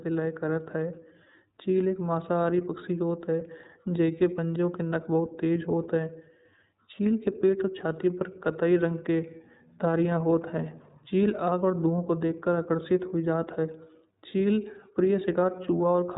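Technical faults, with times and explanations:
Throughout, iLBC codec: speech stops at 3.8 kHz and sounds rough and synthetic from independently coded frames, which fits the 13.33 kbps, 30 ms mode.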